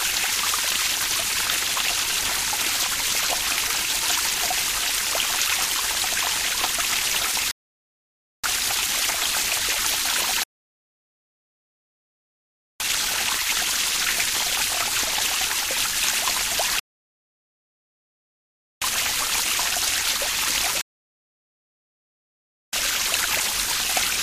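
Rebuffering stalls at 7.51 to 8.44 s, 10.43 to 12.80 s, 16.79 to 18.82 s and 20.81 to 22.73 s: playback exhausts its downloaded audio, falls silent for 0.9 to 2.4 s, then resumes exactly where it paused, adding time without losing any sound.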